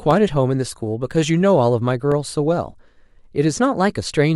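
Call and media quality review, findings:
Periodic USB or driver dropouts in speech. Brief ticks every 1.0 s, 0.11 s to 4.12 s, about five in all, each roughly a millisecond of audio replaced by silence. Likely cause: a background task stalling the USB bus or audio driver at a fixed interval. Unlike network packet loss, the gaps are clock-regular, far shorter than a packet, and audible only over signal, never in pauses.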